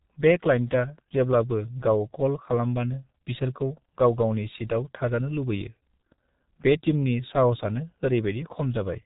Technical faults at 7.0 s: G.723.1 codec

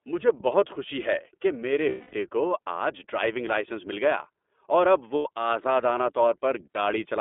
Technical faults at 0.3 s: iLBC codec

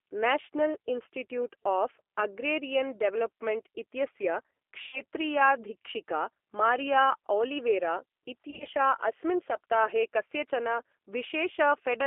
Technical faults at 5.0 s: G.729 codec; VoIP packet loss concealed by the speech codec

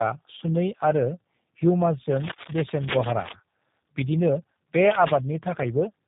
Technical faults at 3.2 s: tandem speech coding; cable scratch noise

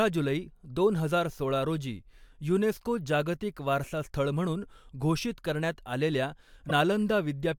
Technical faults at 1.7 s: none

